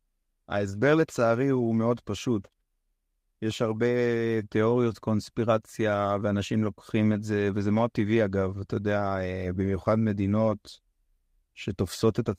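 Four instances of lost packet rebuilt from error correction occur in this speech, at 7.11–7.21 s, 8.41–8.43 s, 9.63–9.77 s and 10.51–10.53 s. In each, the decoder substituted the low-bitrate backup copy carried in the following packet, so the stream never goes silent. The rebuilt stretches, roughly 60, 20, 80 and 20 ms long, sound briefly coarse and grainy. The waveform stays continuous, while the spectrogram shows smeared, noisier patches with blurred harmonics.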